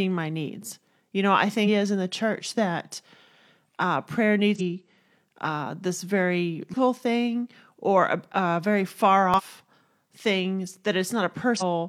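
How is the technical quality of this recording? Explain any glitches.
The speech is marred by five brief glitches of damaged data in a compressed stream: 1.63–1.68 s (after "know I", before "in the church that"), 4.55–4.61 s (after "uh prayer"), 6.69–6.75 s (between "uh this very" and "thing or a"), 9.34–9.41 s and 11.57–11.62 s. Corrupted bytes make the decoder misread frames and resync, so each 50–75 ms event sounds like a chirp, squawk, click or short hole, visible as a broadband smear or abrupt waveform discontinuity.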